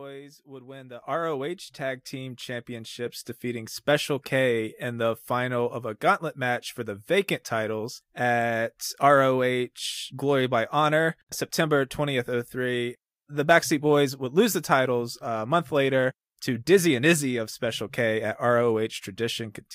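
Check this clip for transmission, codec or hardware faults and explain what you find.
The microphone volume stepped up three times early in the speech. The first step, at 1.02 s just after "would win the", adds about 9 dB, and further steps of about 4 dB follow at 2.04 s and 3.06 s. Each time the call software judged the input too quiet and raised the device's gain in one jump, so voice and room noise rise together and stay louder. A smooth automatic gain control would ramp gradually and ease back. These changes are instant and never reverse.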